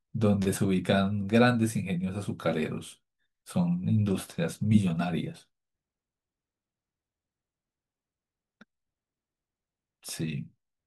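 No technical faults can be heard anywhere in the recording.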